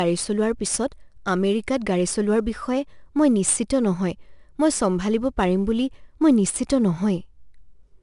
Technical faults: 4-bit ADPCM compression

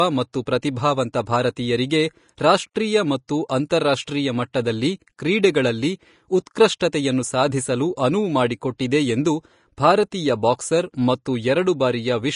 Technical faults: Vorbis compression; pre-echo

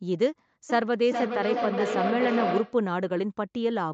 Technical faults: feedback echo between two devices

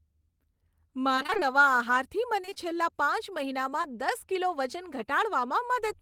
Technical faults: repeated packet loss (robotic sound); short concealed packet loss

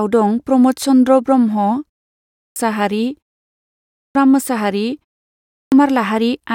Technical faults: clipped start after a pause

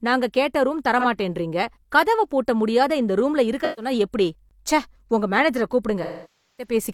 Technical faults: AAC frame loss with concealment

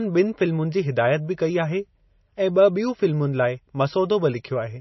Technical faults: MP3 compression

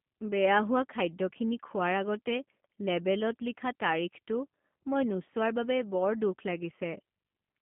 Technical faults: G.729 codec

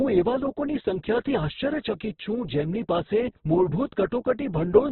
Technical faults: Opus compression; loudspeaker feedback squeal

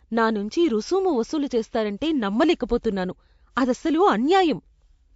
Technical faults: transcoding between lossy codecs

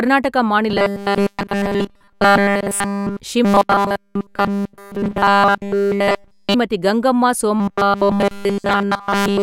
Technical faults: robotic sound from repeated short buffers

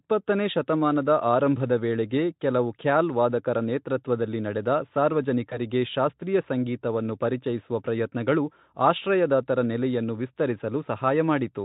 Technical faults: VoIP packet loss concealed by the speech codec

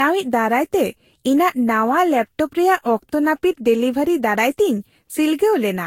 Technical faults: generation loss

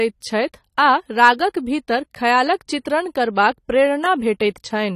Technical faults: AAC compression

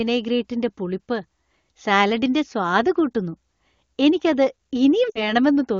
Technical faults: lost AMR speech frames

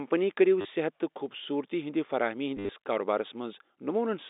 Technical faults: packet loss with last packet repeated

